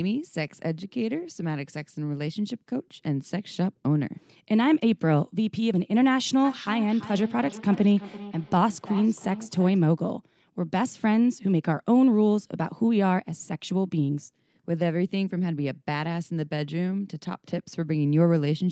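From 6.44 s to 9.87 s the speech picks up a feedback echo between two devices. A second device in the same room replays what this microphone sent, and this microphone catches it again. Its own echo canceller cannot remove sound it never played. Each phrase returns roughly every third of a second, thinner and more ringing on each pass, peaking about 16 dB below the speech. The call audio has nothing above its 8 kHz upper limit.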